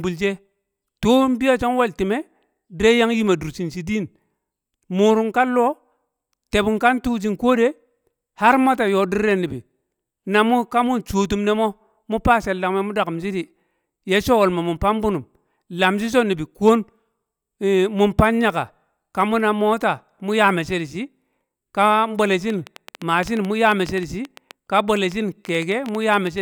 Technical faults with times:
22.50-26.28 train of clicks

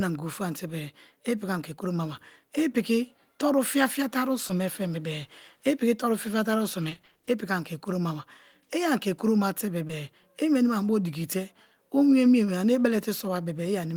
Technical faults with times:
4.47-4.51 short concealed packet loss
6.89-7.29 repeated packet loss (robotic sound)
9.87-9.91 short concealed packet loss

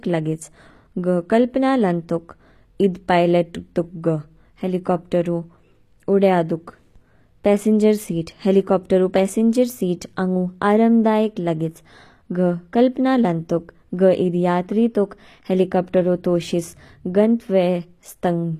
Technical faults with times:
0.00-18.60 HE-AAC compression

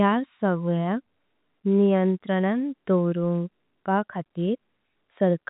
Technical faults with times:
none

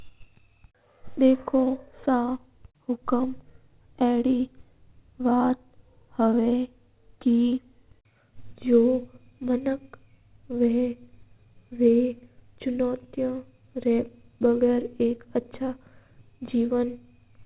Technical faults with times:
none

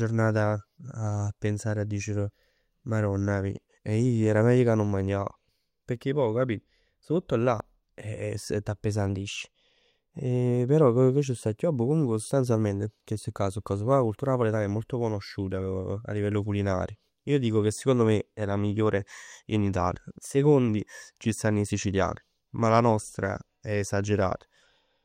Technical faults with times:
9.10-9.65 drift correction step
20.04-20.68 drift correction step

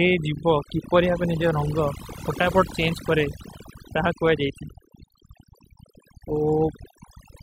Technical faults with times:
0.00-7.42 overdone noise removal

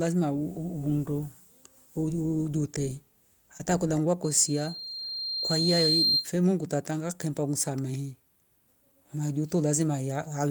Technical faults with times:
3.57-3.61 short concealed packet loss
4.23-6.32 loudspeaker feedback squeal

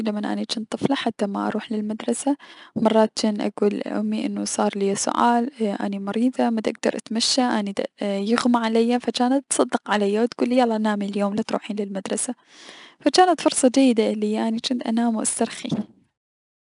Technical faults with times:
0.00-16.61 4-bit ADPCM compression

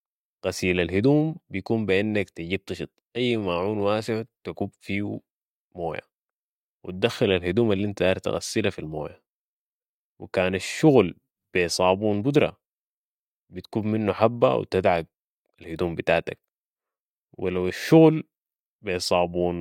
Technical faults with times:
none

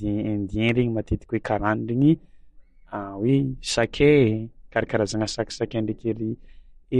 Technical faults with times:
0.00-6.99 MP3 compression

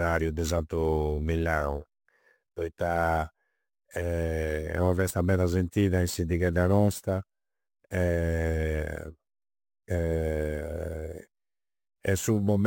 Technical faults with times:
0.00-12.67 imaging from sample-and-hold upsampling

